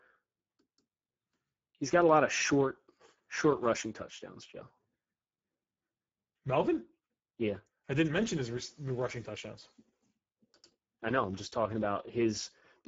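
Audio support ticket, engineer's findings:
Speex codec damage throughout speech: hoarse, noisy texture, consistent with a roughly 10 kbps mode starving the excitation. Spectrogram: nothing above 7.7 kHz; 4 to 7.7 kHz band shows smeared noise-like fill instead of clean harmonics.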